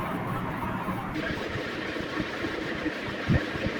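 At 1.15 s the speech jumps into a section at the wrong speed that runs to the end of the clip at 3.80 s. From that point it plays 1.73 times too fast, so pitch rises by roughly ten semitones and the delivery turns high and hurried. The likely cause is a player or editor running this stretch against the wrong clock. On a spectrogram the harmonics and formants step abruptly upward at 1.15 s, while the waveform's syllables appear compressed in time.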